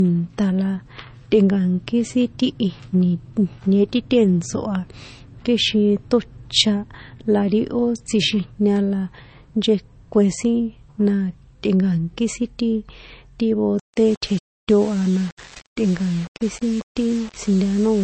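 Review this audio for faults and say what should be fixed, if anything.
The speech carries low-bitrate audio saved at a high bitrate throughout. Nothing is present above 8.3 kHz, and the smeared, swirly texture of a heavily squeezed MP3 persists even though the file is stored generously. This most likely came from an MP3 at roughly 32 kbit/s re-encoded at a high rate. Unlike a plain low-pass filter, the coding artefacts remain alongside the cut-off. Keep the original source and encode once from it rather than from a compressed copy.

From 13.79 s to the end, the speech shows low bit depth without dither. Grainy distortion rides on the sound and rises and falls with it, sitting only around 25 dB below the signal. That level fits coarse rounding to something like 6 bits. Quiet stretches turn gritty or sputter instead of fading smoothly. That tracking distinguishes it from steady background hiss, which stays constant regardless of level. 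Keep adequate bit depth through processing and apply dither whenever reducing word length.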